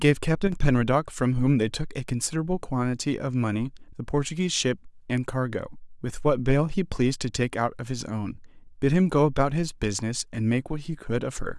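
Speech, with a brief level dip from 0.47 to 0.52 s that sounds like one channel drops out, likely a momentary loss of one side of a stereo feed before it was folded to mono. For those 50 ms the shared content falls by about 6 dB and anything carried only on the missing side vanishes. A waveform would show an abrupt, rectangular step down in amplitude, and a spectrogram a thin vertical band of uniformly reduced energy across all frequencies.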